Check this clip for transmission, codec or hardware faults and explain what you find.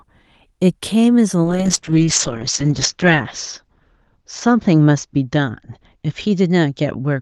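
There is one fault: a call bitrate drop. From 1.45 s to the end, the Opus stream's bitrate falls from 40 kbps to 7 kbps, bottoming out for about 1.5 s. With so few bits, the encoder quantises coarsely and narrows its bandwidth from 12 kHz to 8 kHz, so the speech turns muffled and watery. On a spectrogram, energy above 8 kHz vanishes abruptly and the harmonics look smeared and blotchy.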